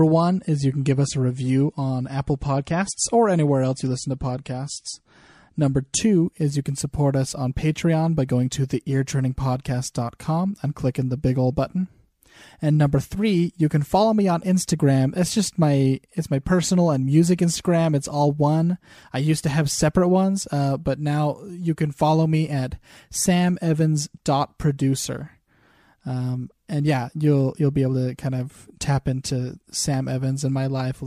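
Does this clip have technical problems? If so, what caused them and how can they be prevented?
Yes. For the first 6 seconds the speech sounds dull and smeared, with nothing above about 10.6 kHz and swirly codec artefacts. At 6.0 s, just before "is you can support", the top end and clarity snap back with no gap. This is an adaptive stream starting at a low bitrate: the player began on a low-quality version, which fits roughly a 40 kbit/s MP3, and switched to a richer one, about 128 kbit/s, once it had measured the connection. To prevent it, start playback on a higher-bitrate version or estimate bandwidth before starting.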